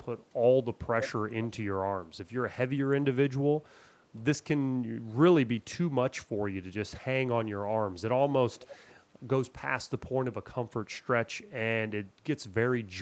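Echo leak appears at 1.01 to 1.12 s, 1.3 to 1.65 s and 8.53 to 8.96 s: a delayed copy of the speech trailing the original by roughly half a second (466 ms in the first two, 483 ms in the last). The first scrap is nearly as loud as the speech; the later two are faint. The likely cause is a far-end loudspeaker whose echo canceller let part of the playback back into its microphone, returning it through the 8 kHz-limited Opus call path.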